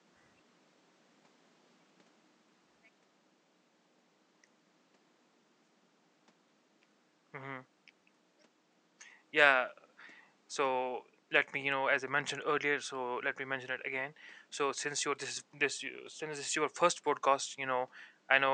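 No technical faults are audible.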